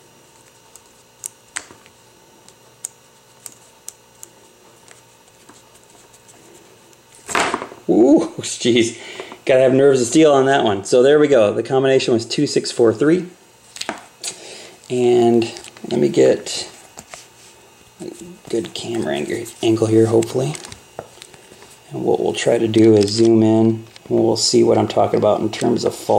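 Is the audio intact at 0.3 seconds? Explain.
Yes, the audio is intact at 0.3 seconds, with no dropout, click, distortion or other fault at that moment.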